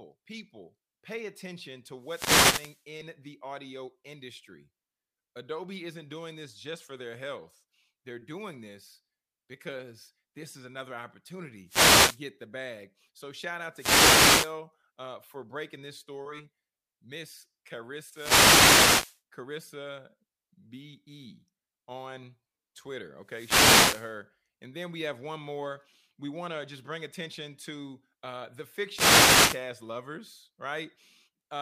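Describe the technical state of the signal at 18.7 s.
At 18.7 s you're right in the middle of a wireless microphone noise hit, running from about 18.07 to 19.21 s. The analogue FM radio link fades as reflected signals cancel, so receiver noise swells up and you hear a brief swish of static over the speech.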